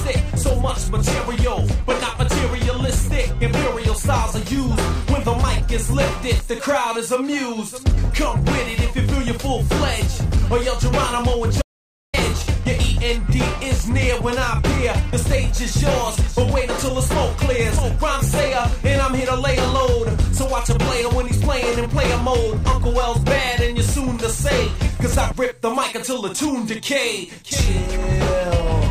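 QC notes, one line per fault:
11.62–12.14 s, audio dropout to silence: the input feed was likely lost for about half a second while recording carried on writing silence. The sound stops abruptly mid-flow, leaving 0.52 s of total silence with no room tone, then resumes just as suddenly.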